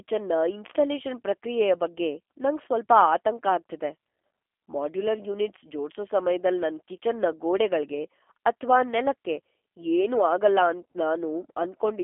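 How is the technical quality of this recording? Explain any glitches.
The speech throughout the clip has gone through a low-bitrate G.729 codec, and the damage is plainly audible.

From start to finish the sound is confined to a telephone band of roughly 300 Hz to 3.4 kHz, with nothing above 3.6 kHz. The G.729 codec doesn't send the waveform. It sends a vocal tract filter, a pitch predictor and a few pulses per frame, and the decoder rebuilds speech from those, which fits a rate of about 8 kbit/s. That rebuilding gives the speech a slightly rough, synthetic buzz. A plain band-limiting filter would only muffle the sound. The artificial edge is what shows the codec at work.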